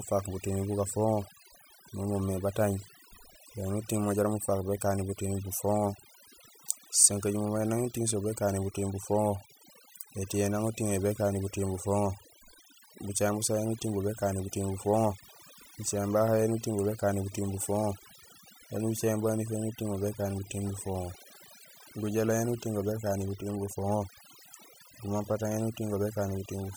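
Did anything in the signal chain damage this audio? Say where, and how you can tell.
Yes. A noise reduction stage in the processing chain was set far too aggressively, producing overdone noise removal across the whole speech clip. The suppressor pulls individual frequency bands down or out entirely whenever they sit close to its noise estimate, so the background collapses to near silence scattered with twinkling, chirpy specks. Quieter parts of the voice fall below that threshold too and are stripped away.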